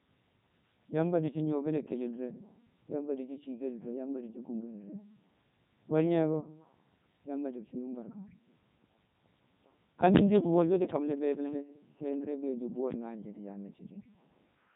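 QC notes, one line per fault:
throughout: Codec 2 vocoder, the speech turns robotic and buzzy with nothing above 3.8 kHz, consistent with heavy damage from 3.2 kbit/s resynthesis that discards the waveform.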